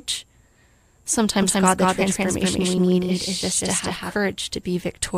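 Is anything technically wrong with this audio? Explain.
Yes. From 1.42 s to 4.16 s there is a doubled audio track. A second, full-band copy of the speech runs around 200 ms behind and at about the same level as the original. The likely cause is the signal being captured twice, once through a slower path, or an edit stacking two offset copies. Unlike a room echo or reverb, the copy has no decay and no room colouring, and it appears and vanishes abruptly at those two times.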